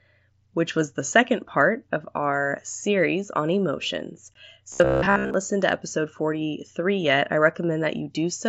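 A speech recording carried over a Bluetooth mSBC headset link, whose wideband codec leaves light graininess on the voice, has two faults. First, unconcealed Bluetooth headset packet loss at 4.34 s drops about 15 ms of audio, which fits two lost headset frames replaced by silence. The speech breaks off with an abrupt-edged hole. Second, from 4.72 to 5.34 s the system likely fell behind in delivering new audio and kept repeating its last 15 ms buffer while most of the real sound was skipped. The result is robotic sound from repeated short buffers, a rigid metallic buzz locked at about 67 Hz.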